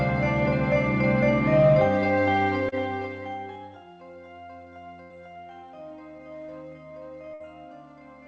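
At 2.69 to 2.75 s the music has a short concealed packet loss. About 30 ms of the stream never arrived, and the receiver covered the hole with roughly 29 ms of sound continued from what came just before, then blended back in. It is heard as a brief smear or wobble rather than a gap, and the music carries on from the right place, which sets it apart from the later faults.

At 5.03 to 5.13 s and again at 7.34 to 7.43 s there is a burst of packet loss. Each time about 60 ms went missing in a run, and the receiver stretched the last sound for roughly 70 ms and then 61 ms while fading it, giving a held, dying buzz or hiss. The music then resumes slightly further on, so a slice is skipped, unlike the patch at 2.69 s.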